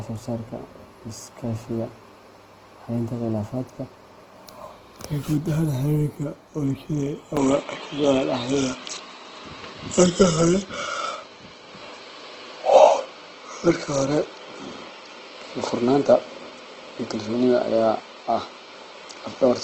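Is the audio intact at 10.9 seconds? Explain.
No. Opus compression runs through the whole clip, including 10.9 s: the sound is grainy and rough, likely from Opus music-mode coding at a low rate near 16 kbps filling starved bands with folded or noisy content. An input switched to a poorer device covers 7.37 s to the end, likely a change of microphone: from the switch on, nothing passes above 7.6 kHz, so the sound turns duller, with a level shift of about 5 dB and a faint new noise floor.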